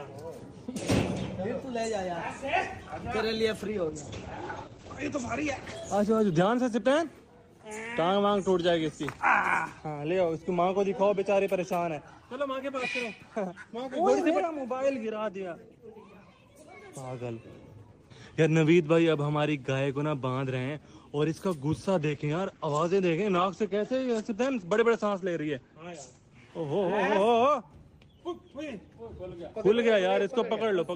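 A call bitrate drop runs from 3.59 to 6.87 s, and another from 22.0 to 27.69 s. In both, the encoder cut its bit budget sharply, to a rate that sounds like roughly 10 to 12 kbps against about 32 kbps before, and narrowed the band to 8 kHz. The sound turns muffled and rough, bottoming out for 1.7 s in the first event and 4.2 s in the second, before detail returns.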